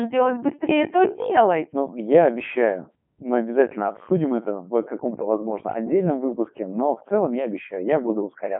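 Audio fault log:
Throughout: Codec 2 vocoder. The speech is resynthesised from sine waves carrying only pitch, voicing, energy and spectral envelope, so the waveform is lost and it sounds heavily robotic and buzzy, which fits the 3.2 kbit/s mode. The band runs 150 Hz to 3.4 kHz, with nothing above 3.7 kHz.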